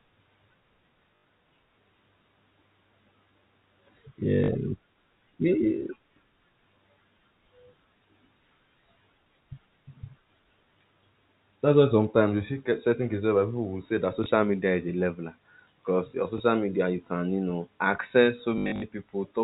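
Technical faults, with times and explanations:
1.16–1.24 s, 4.44–4.48 s, 14.24–14.26 s (between "people will say that" and "media is a leveler"), 16.38–16.40 s (before "media you can you"), 18.58–18.82 s (after "can you know access"): packet loss with last packet repeated. Gaps of 80, 40, 20 and 20 ms, then 180 ms scattered over 240 ms, are filled by replaying the previous packet. That produces a robotic stutter and, during the longer runs, a 50 Hz buzz that fits 20 ms packets. On a spectrogram, a join that clicks shows as a thin vertical line with copied blocks between joins, and the waveform shows identical segments repeated back to back.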